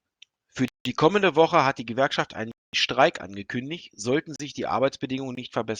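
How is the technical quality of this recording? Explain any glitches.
The speech is interrupted four times by blocks of digital silence, at 0.68 to 0.85 s (170 ms, which fits an 8192-sample buffer), 2.52 to 2.73 s (215 ms), 4.36 to 4.40 s (37 ms) and 5.35 to 5.37 s (21 ms). In each block the sound cuts out abruptly, most likely because the output buffer wasn't filled in time. The two long gaps sound like holes and the short ones like pops.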